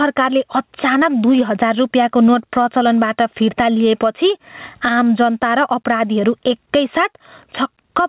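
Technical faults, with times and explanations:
Throughout, gain pumping: the input gain was likely set far too high for the microphone, so a fast limiter or compressor keeps clamping the level whenever the speech gets loud and releases it in the pauses. The level swings by something like 15 dB. Loud and quiet passages sit unnaturally close together, and the speech sounds squashed over a narrow telephone band topping out at 4 kHz.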